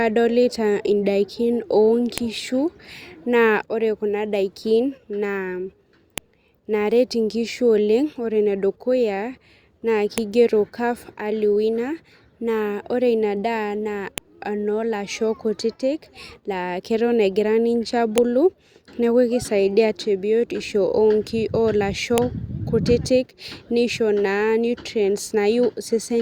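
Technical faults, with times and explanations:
2.18, 6.18, 10.18, 14.18, 18.18 and 22.18 s: file header played as audio, a sharp snap every 4 s where pieces were joined and each header's bytes got played as sound.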